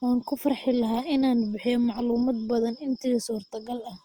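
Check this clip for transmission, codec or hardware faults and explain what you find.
One codec fault runs through the whole speech clip. Likely Opus compression: band energy is kept, but starved bands are filled by folding or noise, so the audio sounds rough and grainy, consistent with about 24 kbps.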